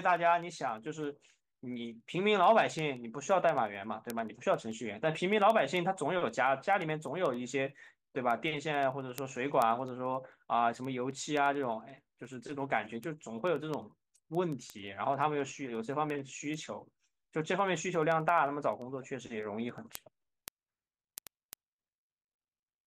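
From 0.16 s to 22.84 s, the speech carries word clock ticks: sharp clicks of uneven strength at a steady rate of roughly ten per second, about 300 in total. The receiving device is running on its own clock instead of locking to the sender's digital link. The two clocks differ by something on the order of 300 ppm, so they slip past each other about every tenth of a second. Each slip misreads a few samples, and a single sample is dropped or repeated, producing a tick.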